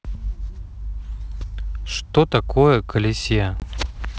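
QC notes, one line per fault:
3.60–3.64 s, packet loss on an ADPCM call: about one packet's worth of audio, 20 ms, went missing and was filled with silence, leaving a hard-edged hole. Afterwards the receiving decoder's predictor and step size no longer track the sender's, so the returning speech is briefly decoded from the wrong starting point.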